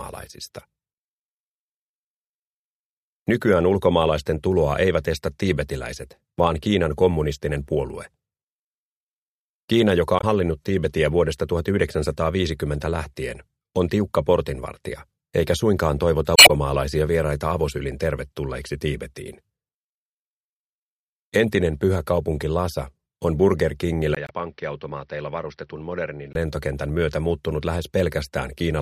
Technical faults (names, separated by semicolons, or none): damaged data in a compressed stream; input switched to a poorer device